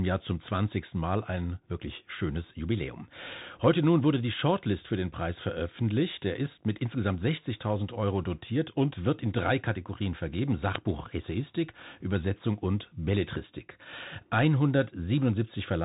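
Speech recorded through a narrowband link: the audio sounds muffled with nothing above about 3.8 kHz, s sounds are scratchy, a granular hiss sits underneath, and louder high sounds distort. That points to the Bluetooth CVSD headset codec, whose one-bit, 64 kHz delta coding with an adaptive step cannot follow fast, loud rises. At 10.75 s a very brief, loud crack cuts in. This is an uninitialised buffer: about 5.8 ms of leftover memory was played as samples before real audio was written, which fits a 256-sample buffer.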